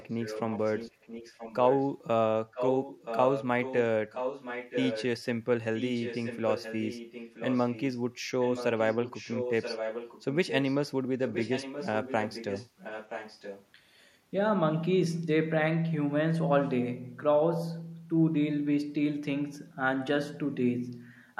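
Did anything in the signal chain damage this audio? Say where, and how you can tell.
Yes, there's an echo leak in the call processing stage. A delayed copy of the speech trails it by about 973 ms through seven stretches: 0.0–1.87, 2.52–3.45, 3.61–3.8, 4.1–5.05, 5.75–7.99, 8.4–10.75 and 11.2–13.66 s. Mostly it sits around 10 dB under the voice, rising to roughly 5 dB under at 2.52 and 4.1 s. Likely a loudspeaker-side echo canceller failing to subtract what its mic picked up, so the residue came back down the line.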